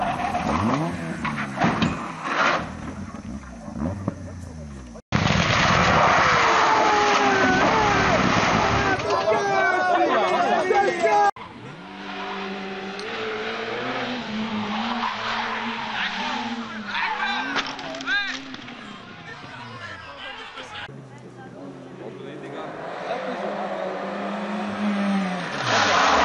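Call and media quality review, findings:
Nothing here calls for a ticket; it all comes across as steady and unremarkable from the first moment to the last.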